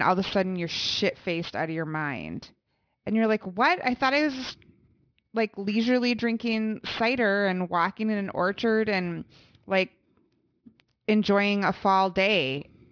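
A speech recording with aliasing throughout. The spectrum stops abruptly at about 5.5 kHz, which fits a sample-rate drop from 48 kHz to 11 kHz done without an anti-aliasing filter. Energy that lay above that fold point has mirrored back down into the audible band as inharmonic components unrelated to the speech, sitting roughly 20 dB below the signal. Sibilants take on a gritty, metallic edge, and the band runs hard up to its ceiling instead of rolling off.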